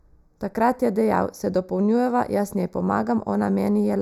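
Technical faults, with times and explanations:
Throughout: channel delay (comb filtering). The speech sounds thin and hollow, with a dulled, phasey upper range. One channel arrives a fraction of a millisecond behind the other, and when the two are summed to mono, the components they share cancel at evenly spaced frequencies. This carves fixed notches into the spectrum, the first falling around 3 kHz and the next roughly 6 kHz above it, which removes presence in the upper range.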